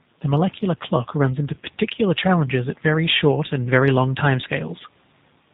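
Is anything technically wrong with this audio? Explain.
Yes. Throughout the speech, the audio has passed through a G.729 codec, most likely the G.729A variant at 8 kbit/s. It discards everything above 4 kHz and rebuilds each 10 ms frame from a vocal tract filter, a pitch predictor and a few pulses, so the speech sounds muffled, plainly rough and synthetic.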